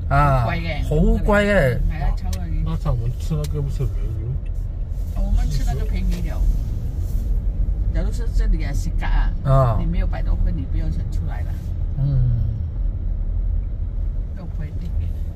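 Nothing stood out on listening to this audio.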